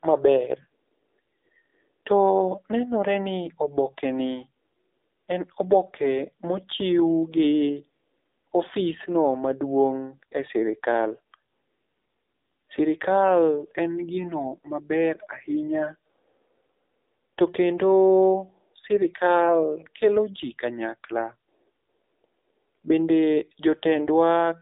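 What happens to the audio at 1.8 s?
At 1.8 s, as everywhere in the clip, the speech runs through the AMR narrowband mobile codec: nothing above 3.7 kHz, with a buzzy, synthetic edge that fits roughly 7.4 kbps.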